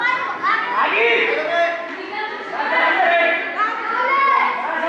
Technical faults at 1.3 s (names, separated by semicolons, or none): none